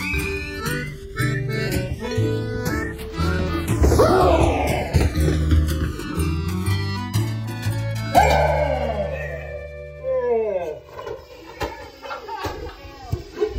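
Throughout, the channels are drifting apart: two clocks disagree by roughly 300 ppm, sliding the interchannel delay toward about 3 ms, so mono sums sweep comb notches as slow flanging.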